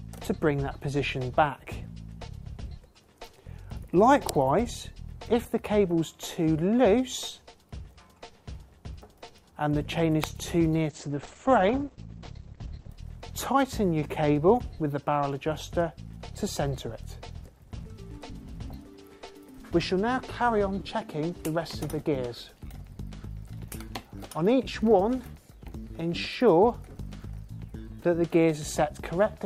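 At 4.29 s and again at 10.24 s there's a sharp snap sitting on top of the sound, each one very brief. That's most likely an electrical switching spike, a nearby switch, motor or static discharge arcing and getting picked up by the audio line.

Then from 10.89 to 12.89 s, two seconds in all, the quality suddenly drops with no gap: codec artefacts come up and nothing is left above 8.6 kHz. It's the adaptive stream at a lower bitrate, consistent with a switch from about 64 to 12 kbit/s Opus.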